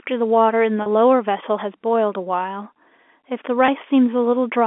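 Packet loss with pitch repetition struck this telephone-band speech twice, at 0.82 to 0.86 s (40 ms) and 3.66 to 3.68 s (20 ms). The receiver filled each gap by repeating the last pitch period, so the speech briefly hangs on a slightly held, buzzy tone.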